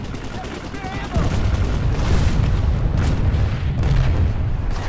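Nothing here registers as a technical fault at any point in the audio.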